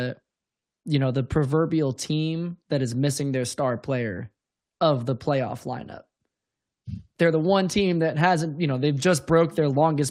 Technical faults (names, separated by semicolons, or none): clock drift between sender and receiver; repeated timing corrections